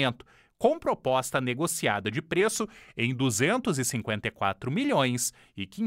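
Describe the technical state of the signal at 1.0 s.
At 1.0 s the signal is intact, with no dropout, distortion, glitch or other audible fault.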